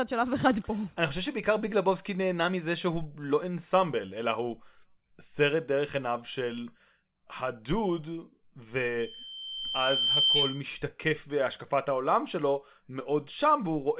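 A speech recording carries a loudspeaker feedback squeal from 8.99 s to 10.70 s. A single tone at 3.1 kHz swells up over about a second and a half. It ends about 5 dB louder than the speech. The cause is a microphone picking up the loudspeaker it feeds. At that one frequency the loop gain exceeded one, so the tone kept feeding itself. Nothing reaches above 4 kHz, which fits a G.711 call codec.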